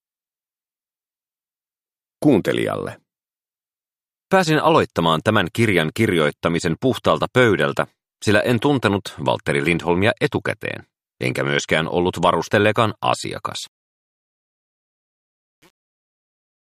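The audio fades out smoothly in level from roughly 13.6 s to the end at 16.7 s, but from 13.64 s the fade carries truncation distortion. The signal turns gritty, and it is worst from 13.86 s onward. The grain fits a fade computed at about 8-bit resolution without dither, so the waveform collapses into a few square steps. Unlike a noise gate, the distortion follows the falling level itself rather than opening and shutting.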